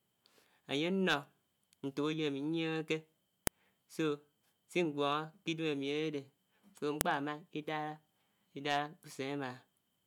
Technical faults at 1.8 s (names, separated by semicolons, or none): none